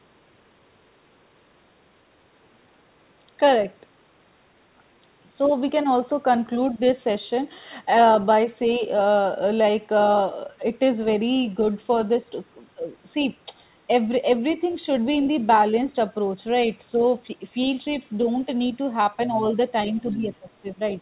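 At 14.5 s a brief scrap of a second talker surfaces for about 60 ms, roughly 25 dB below the main speech. This is the other side's voice leaking through. It likely comes from the far-end signal playing on the talker's loudspeaker and reaching the microphone, with the echo canceller leaving a residue. Two more fragments follow, at 19.26 to 19.47 s and 19.82 to 20.36 s. Both are louder, about 20 dB down.

From 19.94 to 20.79 s, overlapping the last leak, the main talker's level dips in pieces, falling by as much as about 15 dB, across some 400 ms in total. This is speech suppressed in double talk. With both sides active, the echo canceller likely could not separate near-end speech from the echo and attenuated everything, so the talker fades and chops. The whole clip stops at 4 kHz, which fits a narrowband G.711 call codec.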